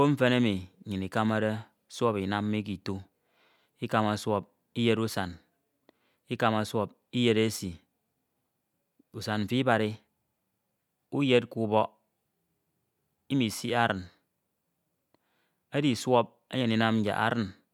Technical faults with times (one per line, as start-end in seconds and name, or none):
none